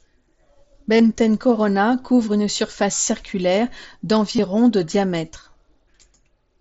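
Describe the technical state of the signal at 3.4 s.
At 3.4 s the speech is intact, with no fault at that moment, and it is carried through the mSBC Bluetooth headset codec, whose wideband path reaches up to 8 kHz.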